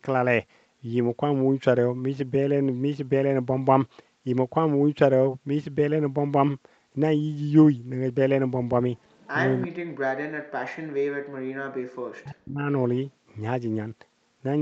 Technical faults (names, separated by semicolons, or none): echo leak; speech suppressed in double talk